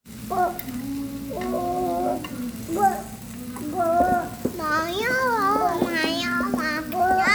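Everyday sounds, with no technical faults heard anywhere.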